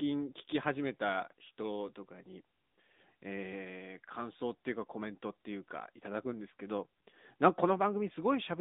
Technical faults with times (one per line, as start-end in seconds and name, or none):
0.00-8.60 AMR narrowband mobile codec